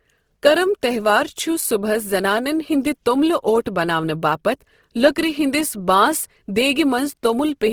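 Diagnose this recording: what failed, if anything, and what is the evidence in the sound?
The failure sits at the codec stage and lasts the whole clip: the speech sounds rough and grainy, with a noisy texture laid over voiced sounds, yet the top end is not cut back; content reaches about 20.3 kHz. That points to Opus compression, likely in its CELT music mode at a starved rate that fits about 16 kbps, where empty bands are refilled with folded or noise energy. Unlike MP3 damage, there is little swirling or holey warble, and it lacks the muffled hoarseness of Opus speech mode.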